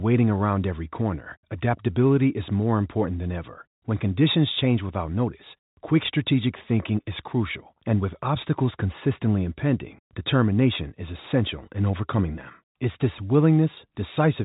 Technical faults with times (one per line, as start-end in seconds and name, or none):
none